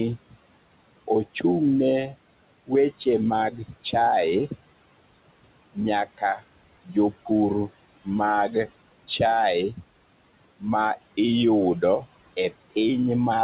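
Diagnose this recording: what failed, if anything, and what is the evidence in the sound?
Noise suppressor artifacts occur in call processing throughout. Room noise is pushed down about 20 dB between phrases and returns under speech, showing as flickering, speckled gaps in the spectrogram's noise floor.

Speech is cut by the noise suppressor from 3.51 to 3.95 s and from 6.06 to 6.42 s. Quiet speech was mistaken for noise and dropped about 14 dB and 12 dB, appearing as brief waveform dips and faded spectral energy.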